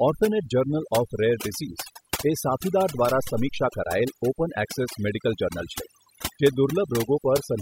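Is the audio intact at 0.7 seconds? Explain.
No. At 0.7 seconds, as throughout the clip, overdone noise removal is at work: an aggressive noise reduction stage mutes frequency bands near its noise estimate. That leaves a reduced background broken up into twinkling specks.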